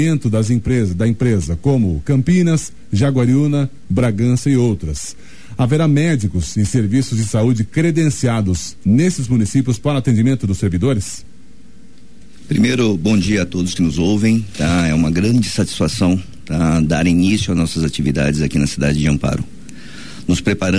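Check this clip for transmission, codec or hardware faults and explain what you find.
Nothing here sounds like a transmission, codec or hardware problem, so there's nothing to flag.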